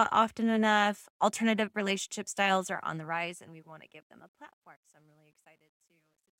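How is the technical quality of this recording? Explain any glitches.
The recording has one glitch, in the closing fade. Truncation distortion on the fade runs from 2.56 s to the end at 6.39 s. The fade-out is rendered with too few bits and no dither, which fits about 11-bit resolution. The speech roughens into grit, and from 4.24 s onward the distortion is at its worst.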